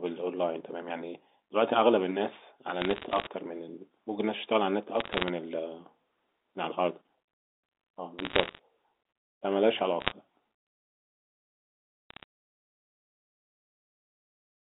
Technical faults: bit errors on a digital phone line

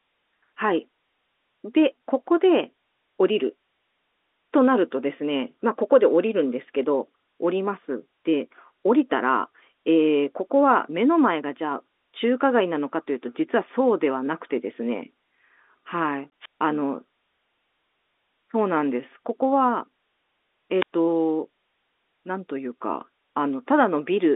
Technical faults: packet loss filled with silence; wireless microphone squelch dropout

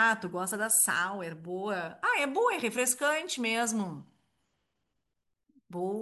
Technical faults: none

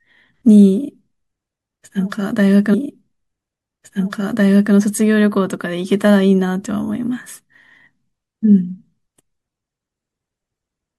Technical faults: stream segment repeated

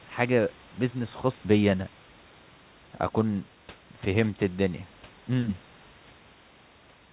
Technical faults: none

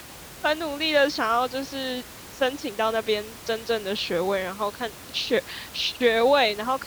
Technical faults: none

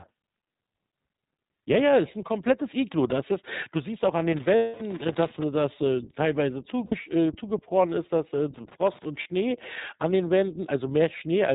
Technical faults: iLBC codec; loose connector crackle; lost iLBC frames

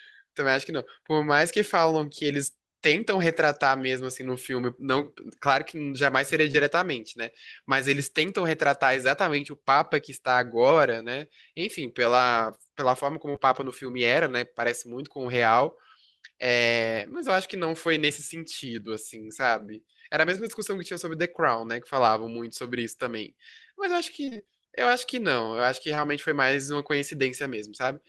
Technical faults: short concealed packet loss; repeated packet loss (robotic sound)

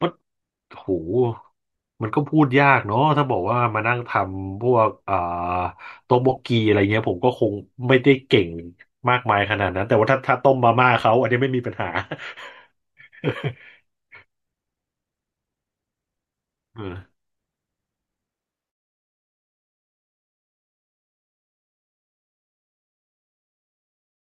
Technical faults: none

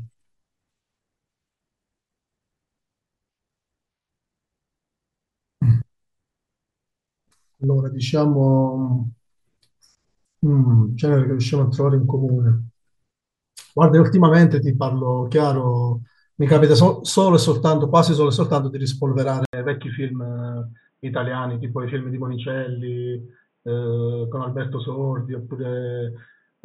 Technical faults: input switched to a poorer device

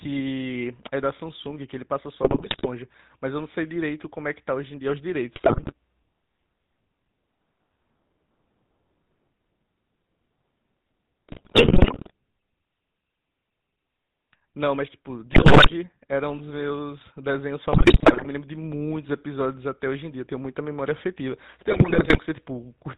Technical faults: GSM full-rate codec; GSM bit errors

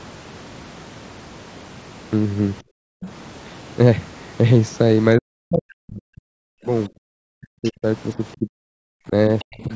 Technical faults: background gated by the echo canceller; speech suppressed in double talk; other side's voice leaking through

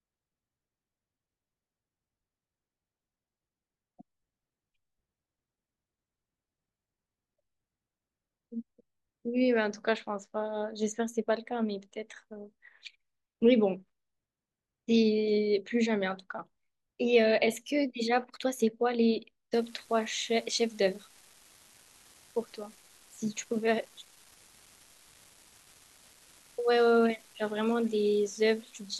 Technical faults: unreliable data bit

